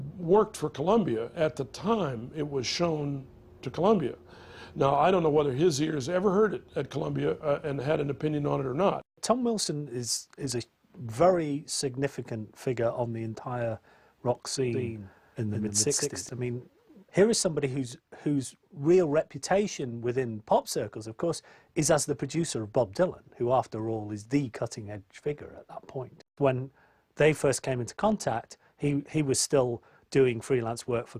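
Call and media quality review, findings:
Doubled audio track, 14.73 to 16.29 s. Full-band copy trails the original by about 150 ms, a few dB quieter. No decay or room colour. Starts and stops abruptly. Likely a second capture path or misaligned edit holding two copies.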